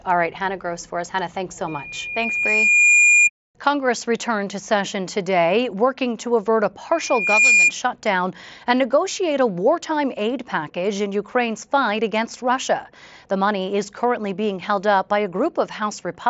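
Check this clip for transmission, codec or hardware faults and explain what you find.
There is one fault type, occurring twice: loudspeaker feedback squeal, heard over a wideband mSBC headset link whose audio stops near 7.7 kHz. From 1.67 to 3.30 s, after "thanks so", a 2.4 kHz tone swells over roughly one and a half seconds. From 6.91 to 7.73 s, between "working to avert a" and "shutdown and negotiate a", the same tone builds faster, in about half a second. In both cases the tone peaks about 10 dB above the speech. The microphone is picking up its own loudspeaker, and loop gain above unity at 2.4 kHz makes that frequency grow into a piercing whistle.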